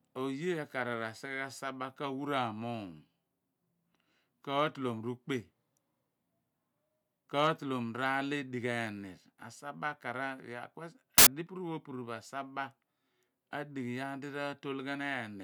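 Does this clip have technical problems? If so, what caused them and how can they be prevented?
Yes, there's a short burst of samples built from the wrong bytes, from 11.18 to 11.27 s in this speech clip. For about 85 ms, each sample's bytes were assembled in the wrong order or alignment, so the fast-changing low bits became the large part of each value. That turns the speech into loud, harsh broadband noise. To prevent it, make sure the reader uses the correct byte order and stays aligned to sample boundaries.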